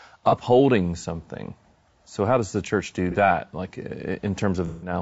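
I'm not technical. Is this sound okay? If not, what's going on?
No. The whole recording sounds plainly rough and grainy, with hiss between the sounds of the voice and a top end that feels thin or artificial. That is likely low-delay AAC compression, the kind video-call apps use. It chops audio into very short slices to keep the call responsive, but those slices capture a voice's fine detail poorly, and when the data is squeezed hard the voice turns coarse.

There are also three brief glitches, which is AAC frame loss with concealment. Pieces of the audio never arrived, and the decoder patched the gaps by guessing from what came just before. Short smeared, noisy blips occur at about 0.29 to 0.34 seconds and 3.11 to 3.16 seconds. A longer one runs from 4.67 to 4.93 seconds. Its length suggests several pieces in a row went missing.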